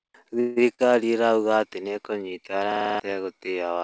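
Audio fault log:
0.40–0.58 s, call audio freeze: Packets were likely held up in transit, so the jitter buffer ran dry. For about 165 ms the receiver stretches the last sound into a fading buzz or hiss rather than falling silent. When delivery resumes, the speech picks up exactly where it stopped, just before "ĩrauga atĩ nĩ ĩkũnyita". Nothing is lost, but everything after this point arrives 165 ms later, so the pause sounds inserted rather than cut.
0.74–0.80 s, short concealed packet loss: About 40 ms of coded speech failed to reach the decoder in time, shortly before "ĩrauga atĩ nĩ ĩkũnyita". The receiver covers the hole by extending the preceding sound, following its pitch where it was voiced and using shaped noise where it was not, then crossfades back into the real signal. The result is a brief smear or wobble, and whatever was in that 40 ms is gone.
2.72–3.00 s, system hang loop: After "ĩrauga atĩ nĩ ĩkũnyita", the host or audio driver stalled while the output hardware kept replaying its ring buffer. 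A single 46 ms slice repeats exactly six times, which fits a 2048-sample buffer. The repetition rate of 21.5 Hz is slow enough to hear as a rapid mechanical stutter rather than a steady tone. Roughly 300 ms of the real audio never plays, and the G.722 band limit at 8 kHz is preserved in the repeats.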